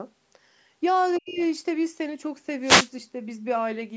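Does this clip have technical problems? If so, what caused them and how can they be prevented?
Yes. From 1.16 to 1.45 s a second, far-end voice can be heard very faintly underneath the talker, roughly 35 dB below the speech. This is other side's voice leaking through, and the likely cause is a loudspeaker at the talker's end whose output reached the microphone without the echo canceller fully removing it. Prevention: use a headset or earphones, or keep loudspeaker volume moderate so the canceller has less echo to remove.

Over almost the same span, 1.19 to 1.41 s, the talker's own level drops sharply, by something like 35 dB at its deepest, across about a fifth of a second. This is speech suppressed in double talk. It is likely caused by both sides speaking at once, so the echo canceller could not separate the local voice from the loudspeaker echo and attenuated everything together. Prevention: with a headset removing the echo path, the canceller has no reason to duck the talker during overlapping speech.

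From 2.61 to 2.91 s a short burst of hiss and static sweeps across the sound, lasting about 0.3 s. This is a wireless microphone noise hit. An analogue FM radio link faded as reflected signals cancelled at the receiver antenna, receiver noise rose, and the noise briefly covered the programme. Prevention: shorten the distance to the receiver, keep line of sight, and use a diversity receiver or a digital wireless system.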